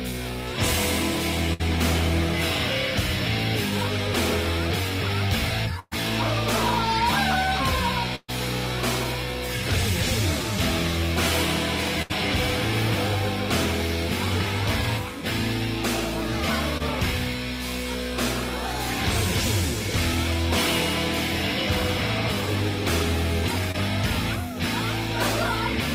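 At 1.53 to 1.61 s, 5.79 to 5.93 s, 8.15 to 8.30 s and 12.02 to 12.12 s the sound hangs on itself and fades before jumping ahead. These are bursts of packet loss. The receiver stretched the last audio for 60, 120, 128 and 74 ms, and 40, 120, 120 and 80 ms of material is gone. The second and third gaps end in 10 and 20 ms of silence. The first also resumes 20 ms later than it should.

At 16.78 to 16.82 s and again at 23.72 to 23.76 s there is only a brief smear or wobble. These are short concealed packet losses. In each, about 20 ms never arrived in time, so the decoder extended the preceding sound across the hole and blended back into the real audio. Because each patch is so short, it passes as a small blur rather than an audible gap.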